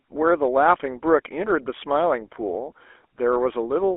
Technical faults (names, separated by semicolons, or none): GSM full-rate codec